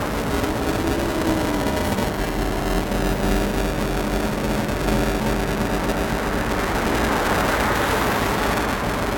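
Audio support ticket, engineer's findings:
Buffer tearing, throughout. Robotic buzz at 345 Hz that is present only while sound plays. Writer and hardware read pointer have drifted, so about a third of each period replays audio roughly 5 ms stale. This fits a 128-sample buffer. Waveform shows hard splices every period. Spectrogram shows a 345 Hz comb over the signal.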